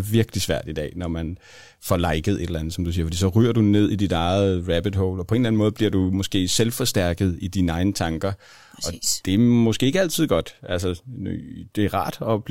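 No audible technical faults detected.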